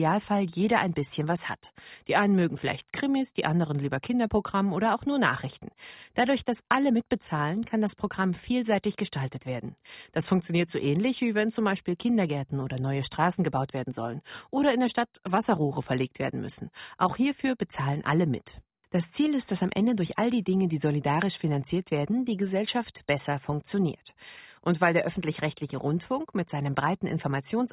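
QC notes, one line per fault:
No faults heard in this speech.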